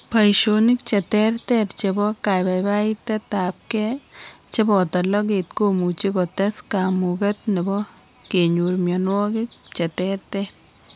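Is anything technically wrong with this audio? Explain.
No, nothing in this recording points to a technical fault; the signal stays intact and continuous throughout, with no interruptions, level problems or processing damage to be heard.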